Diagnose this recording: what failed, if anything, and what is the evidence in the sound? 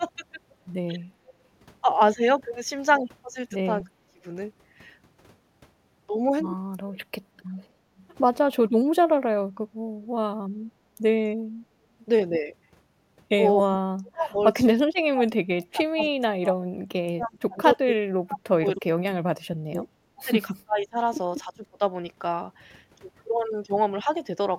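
Speech dips by up to about 40 dB at 3.83–4.24, 6.83–6.96 and 8.67–8.86 s, and in pieces over 13.63–21.81 s. This is likely speech suppressed in double talk by the echo canceller during call processing.

Faint copies of the speech, about 30 to 35 dB down and 283 ms late, surface at 7.56, 10.02 and 16.02 s. This is likely an echo leak past the loudspeaker side's echo canceller.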